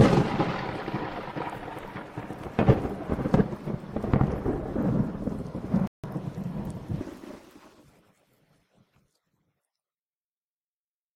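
The audio has two separate problems. First, a rebuffering stall: at 5.87 s it drops to dead silence and picks up again at 6.04 s right where it left off, so nothing goes missing but about 0.16 s of gap gets added. That's the player running dry on downloaded data and waiting for more to arrive before carrying on. Then from 7.01 to 7.83 s there's a section at the wrong speed. It runs at 1.95 times normal, so for that stretch everything sounds rushed and jumps up roughly ten semitones, with speed and pitch shifting together as it goes in and comes back out. That pairing points to a chunk being played or resampled against the wrong clock, likely a timing mismatch in the editing or playback chain rather than anything in the original recording.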